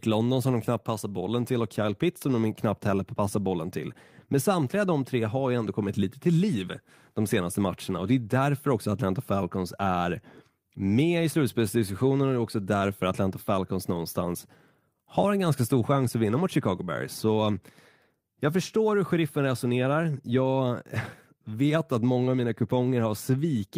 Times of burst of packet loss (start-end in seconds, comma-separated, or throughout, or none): none